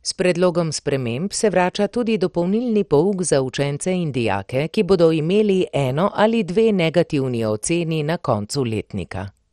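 MP2 compression throughout this speech clip: dull, gurgling, granular sound with nothing above 13.8 kHz, likely from heavy Layer II coding at a low rate near 56 kbps, switching off and coarsening upper sub-bands.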